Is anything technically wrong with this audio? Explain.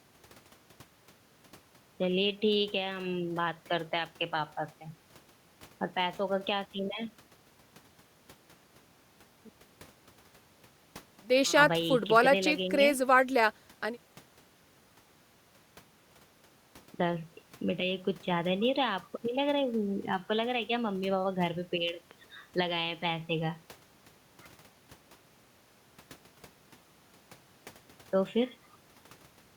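Yes. From 21.89 to 22.13 s, two pops rise a few decibels above the speech, which carries on underneath: a loud pop, likely a voltage pulse added to the signal.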